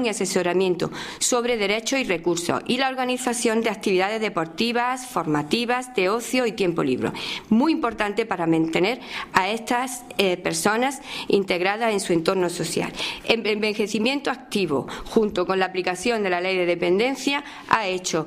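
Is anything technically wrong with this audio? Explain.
No, nothing is technically wrong with this audio.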